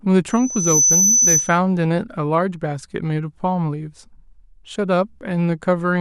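At 0.30 s a loudspeaker feedback squeal starts up, a thin, piercing tone at 6 kHz that swells over roughly half a second until it sits a bit above the speech, by about 5 dB. The mic is hearing its own loudspeaker, and at 6 kHz the loop gain tips past one, so the tone feeds itself and climbs. It keeps ringing until it cuts out at 1.59 s.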